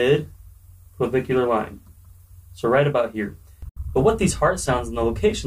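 At 3.69 s the sound cuts to silence for about 70 ms, resuming at 3.78 s further along, as though playback had continued unheard. This is likely a Bluetooth dropout: a few packets missed their delivery deadline to the headphones and were discarded, leaving an abrupt hole.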